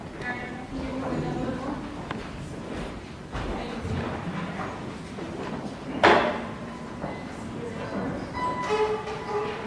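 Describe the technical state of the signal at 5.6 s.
At 5.6 s the signal is intact, with no audible fault at that moment.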